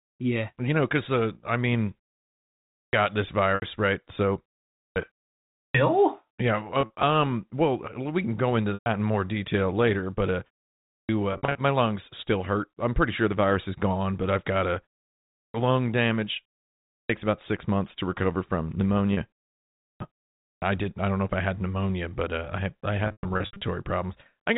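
Clipped starts after a pause occur at 2.71, 4.71, 5.51, 10.83 (after "detail later but uh"), 15.29, 16.87 (after "lung damage"), 19.76 and 20.39 s. The output device sleeps in the gaps and wakes late. About a quarter second of each onset vanishes. Speech jumps in abruptly.

Packet loss with pitch repetition hits at 3.55, 6.81, 8.74, 11.33, 19.14 and 23.05 s. The last one follows "uh I had I" and is the longest, about 0.36 s of gaps scattered over about 0.56 s. The receiver repeats the last pitch period to fill each hole. Short gaps sound like a brief buzzy hold. Longer ones fade toward silence.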